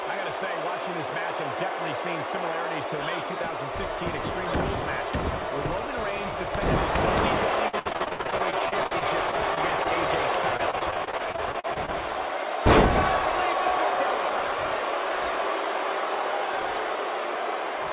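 From 7.68 to 9.87 s the sound turns choppy, stuttering through about twenty short holes, the longest about 68 ms. It recurs from 10.57 to 11.90 s, with around fifteen holes up to 37 ms. This is repeated packet loss (robotic sound): packets kept arriving late or not at all, and each hole was patched by stretching the previous sound, so about a fifth to a quarter of each stretch is filler. The band, cut off at 4 kHz, fits a narrowband telephone codec on the call path.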